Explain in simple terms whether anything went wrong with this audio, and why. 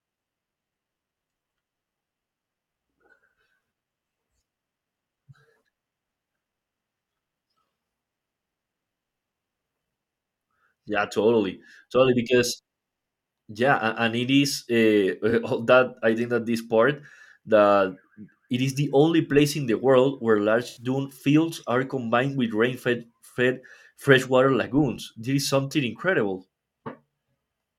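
Two short dropouts from AAC frame loss with concealment occur in this speech, at 15.30–15.33 s and 20.68–20.83 s. The decoder patched each gap by guessing from the last good sound. The 21 ms patch is a brief smear, and the longer 85 ms one covers four lost pieces of sound in a row.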